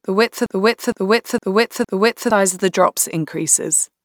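A broken-record loop runs from 0.46 to 2.30 s, after "width of": a 0.46 s fragment repeats four times back to back, likely a stalled stream, before "of the drops".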